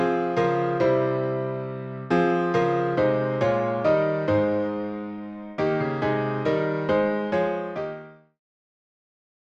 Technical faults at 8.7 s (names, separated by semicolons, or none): none